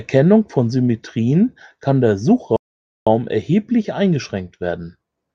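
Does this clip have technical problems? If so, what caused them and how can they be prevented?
Yes. Rebuffering stall from 2.56 to 3.07 s, just after "kann der": playback exhausted its downloaded audio, fell silent for 0.5 s, then resumed without losing anything. A larger playback buffer or adaptive bitrate switching would prevent it.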